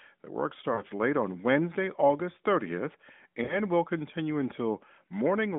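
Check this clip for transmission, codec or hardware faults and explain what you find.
Two short bursts of lost AMR speech frames disrupt this narrowband AMR call.

Lost AMR speech frames, at 0.74 to 0.81 s and 3.44 to 3.58 s: about 40 ms of audio is missing each time, which fits two 20 ms frames. The decoder replays the last good pitch and vocal-tract settings at falling gain, so the sound is briefly drawn out and fades rather than cutting to silence. Recovery is momentarily weak or rough. A plain dropout or a clipped packet gap, by contrast, would give an abrupt hole or click.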